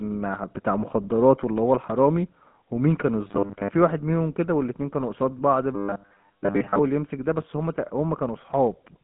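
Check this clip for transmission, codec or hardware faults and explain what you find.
One fault runs the whole length: a GSM full-rate codec. Its pulse-driven vocal-tract model makes the speech plainly buzzy and gravelly, with nothing above 3.8 kHz, which fits a 13 kbps link.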